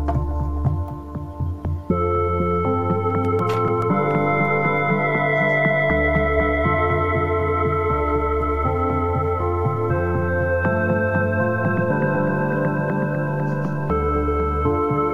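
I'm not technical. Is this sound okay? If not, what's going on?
No. From 3.1 to 4.1 s there are eight evenly spaced CD scratch ticks, one per turn of the disc. The steady rhythm sets them apart from random crackle.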